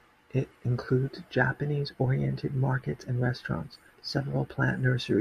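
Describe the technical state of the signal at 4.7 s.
At 4.7 s the speech signal is intact, with no technical fault to be heard at that moment.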